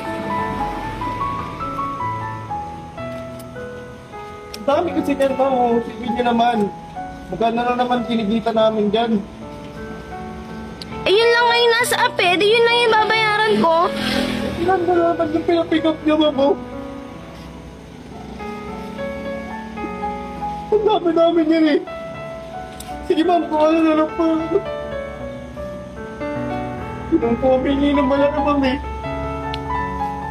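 No technical faults can be heard anywhere in the recording.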